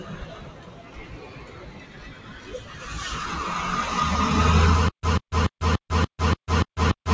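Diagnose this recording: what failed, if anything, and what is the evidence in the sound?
The failure is in call processing: a noise suppressor meant for speech was left running on a clip of everyday sounds. It treats steady tones, ambience and decaying tails as noise, so its gain keeps moving, with swings of roughly 15 dB. Transients get through while sustained material sinks, and the sound pumps and thins. On a waveform the envelope breathes unevenly. On a spectrogram sustained bands fade between onsets while attack columns stay bright, all under an 8 kHz ceiling from the G.722 link.

From 0.0 to 2.84 s the noise suppressor cut the sound harder than anywhere else, for roughly three seconds in all, with the deepest drop about 9 dB. Held and fading parts lose level and their decays are cut short, while sharp onsets come through almost intact. The suppressor judged this stretch to be background and pulled its gain down. 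On a waveform this opening section sits visibly lower, with chopped tails. A spectrogram shows the steady energy dimmed and truncated there.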